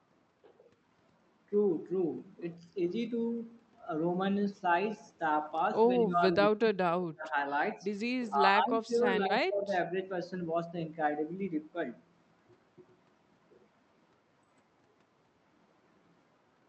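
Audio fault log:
6.0–7.35 s, 8.29–8.43 s, 8.62–9.73 s: speech suppressed in double talk. The speech ducks by up to about 35 dB, then by about 15 and 20 dB, likely from an echo canceller muting it while the far end talks.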